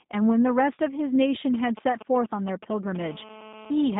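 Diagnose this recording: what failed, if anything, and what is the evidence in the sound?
The codec stage is at fault for the whole clip. The speech has the slightly rough, synthetic grain of G.729 speech coding, and the damage is plainly audible. The sound fits an 8 kbit/s codec rebuilding each short frame from a vocal tract filter, a pitch predictor and a few pulses. On a spectrogram the energy sits in a telephone band of roughly 150 Hz to 3.7 kHz, with nothing at all above 3.8 kHz.

A GSM phone buzz enters at the analogue stage from 3.01 s to 3.95 s. It is a hard, raspy tone at 217 Hz, unrelated to the speech and about 19 dB below it. It holds steady throughout, as it does when a nearby 2G phone is in a call. The audio circuit rectifies the handset's radio bursts, so it recovers their 217 Hz repetition as sound. A spectrogram shows a comb of harmonics on a 217 Hz spacing, and a zoomed waveform shows regular pulses about 4.6 ms apart.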